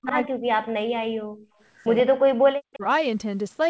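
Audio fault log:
0.00–1.32 s, speech suppressed in double talk: the level drops steeply, by as much as about 40 dB, likely because the echo canceller could not tell the local talker from the loudspeaker echo during overlap.
1.97–2.03 s and 2.73–2.78 s, echo leak: brief copies of the speech return 127 ms late, about 15 dB and then about 25 dB down, likely residual loudspeaker echo.
2.75–2.84 s, speech suppressed in double talk: a short dip of about 15 dB, likely the canceller again turning the talker down during overlap.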